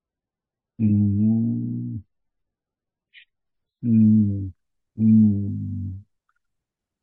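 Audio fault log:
0.0 to 4.0 s, adaptive stream starting at a low bitrate: the speech opens dull and smeared, with nothing above 5.4 kHz and heavy codec artefacts, consistent with an MP3 rendition near 12 kbit/s. At 4.0 s it switches without a gap to a fuller version, which fits roughly 128 kbit/s, once the player has gauged the connection.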